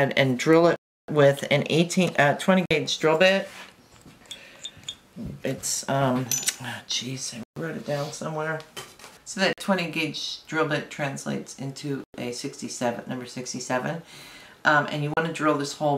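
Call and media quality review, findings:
Six dropouts to silence at 0.76 s (322 ms), 2.66 s (50 ms), 7.43 s (131 ms), 9.53 s (48 ms), 12.04 s (102 ms) and 15.14 s (33 ms). Sound resumes after each gap. Likely a Bluetooth stall. Interference delays packets, the headset buffer empties, and playback halts until the retransmissions land.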